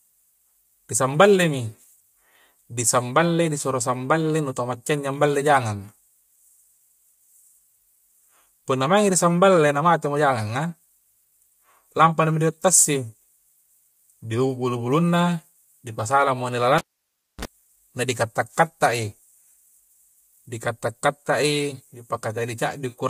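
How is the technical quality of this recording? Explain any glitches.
The recording has two problems: a rough, coded quality throughout and one dropout from a pulled cable near the end.

Across the whole clip the speech sounds grainy and rough, with a hiss-like fill between the voice's harmonics and a top end that seems thinned or synthetic. The likely cause is low-delay AAC compression of the AAC-ELD kind used in video calls. Its short frames resolve pitch harmonics poorly and spend bits quickly, and the damage here is plainly audible, which points to a bitrate around 32 kbps.

From 16.78 to 17.45 s there is a cable pulled and plugged in. A pop at 16.78 s starts about 0.62 s of near silence while the connection is broken. As the plug goes back in, a brief 60 Hz mains buzz lasts about 38 ms, because only the tip contact is touching and the ground is not yet connected. A second pop at 17.45 s marks the full reconnection, and the audio returns.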